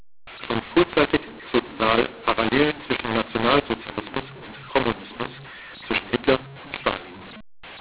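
From the first moment to the last the speech is harsh and gritty. Some parts come out too large while others come out oddly small, and the pauses fill with hiss instead of falling silent. That is the sound of mu-law and A-law mixed up: the telephone audio was written with the A-law curve but read back as mu-law, so every level is mapped wrongly and the quietest samples are pushed well above silence, all within the 4 kHz ceiling of 8 kHz G.711.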